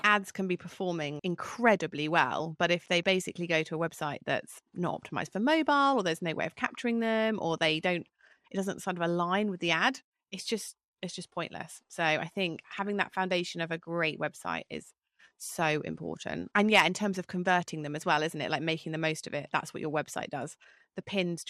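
From start to finish, the speech sounds dull and carries a gurgling, granular roughness, the mark of MP2 compression, likely at a low rate in the region of 80 kbps. Layer II divides the spectrum into 32 equal sub-bands and, when bits run short, drops the upper ones entirely, so the top end flickers in and out while the remaining bands turn coarse. A simple low-pass filter would lose the highs steadily and cleanly, without this unstable, grainy texture.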